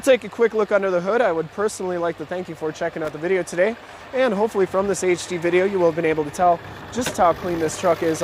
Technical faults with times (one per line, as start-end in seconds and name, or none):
3.05-3.14 loose connector crackle